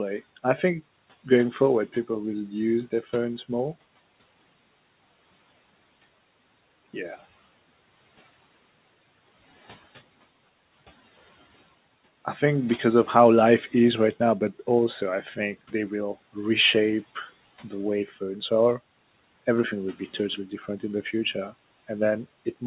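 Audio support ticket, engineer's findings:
Speech cut by the noise suppressor, 18.06–18.17 s: about a tenth of a second of speech dips by about 8 dB and sounds swallowed. The suppressor misjudged the speech as noise and pulled it down with the background. On the waveform the envelope notches inward there. On the spectrogram it is a short faded vertical band against room noise sitting about 24 dB under the speech. Energy stops at 4 kHz, consistent with narrowband G.711.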